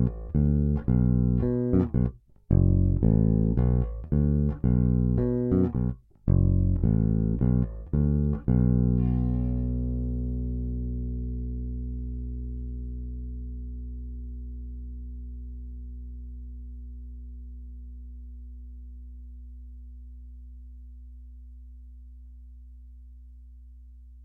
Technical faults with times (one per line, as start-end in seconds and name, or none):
0.00-24.24 sample clock jitter